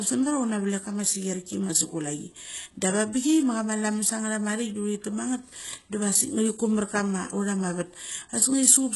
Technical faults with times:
0.00-8.96 HE-AAC compression

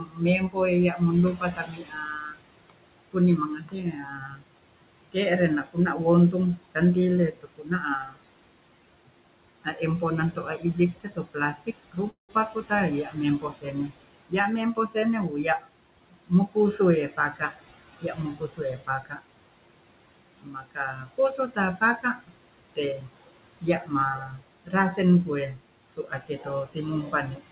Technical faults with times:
0.00-27.52 noise suppressor artifacts
0.00-4.44 speech cut by the noise suppressor
5.12-6.76 speech cut by the noise suppressor
7.32-8.19 speech cut by the noise suppressor
9.64-19.22 speech cut by the noise suppressor
12.10-12.31 call audio freeze
20.36-27.52 speech cut by the noise suppressor

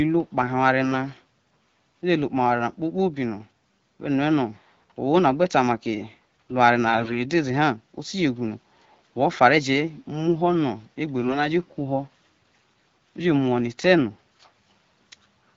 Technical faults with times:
6.88-7.15 AMR bit errors

